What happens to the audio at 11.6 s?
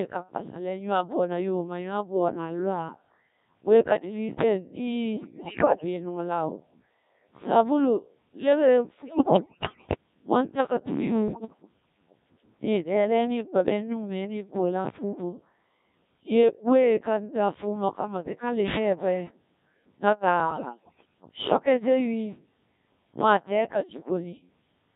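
Around 11.6 s the decoder is fed corrupted data. From 11.28 to 11.62 s, bit errors on digital voice radio flip roughly one bit in ten reaching the vocoder. At such a low rate each bit sets the pitch, level, voicing or spectrum for a whole frame, and the damage spans what sounds like about seven frames. The synthetic speech jumps erratically in pitch, loudness and tone colour, breaking into bleeps, warbles and robotic gibberish until the burst ends at 11.62 s.

Beneath that burst, and across the whole clip, the speech passes through a Codec 2 vocoder at a very low rate; its sound fits about 1.3 kbit/s. Only pitch, voicing, energy and a spectral envelope survive, and the decoder rebuilds the speech from sine waves rather than the original waveform. The result is heavily damaged, robotic and buzzy, and that synthetic timbre is what the bit errors tear apart at this moment.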